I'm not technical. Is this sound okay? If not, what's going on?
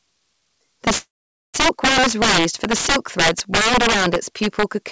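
No. There are two problems. The first is integer overflow, which runs through the whole clip. When the signal got louder than the system's numbers could hold, the loudest bits flipped to the opposite extreme instead of being held at the limit. That happens on only a small share of the loudest moments, but each one comes out as a sharp, violent crack on loud syllables, harsher than ordinary distortion.

The second is a call audio freeze from about 0.98 to 1.56 s, most likely because the call's data was held up on its way to the listener. While the receiver waited, it stretched the last bit of sound into a short fading buzz or hiss, then went quiet for roughly half a second. When the data arrived, playback picked up at "is raised for the" with nothing lost, but everything after it now runs a little over half a second late.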